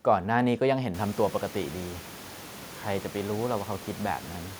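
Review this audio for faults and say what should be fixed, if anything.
Nothing here needs fixing, as no fault can be heard in the speech. The room noise in the background rises by about 24 dB around a second in and then sits about 19 dB below the voice, which is part of the recording rather than a system problem.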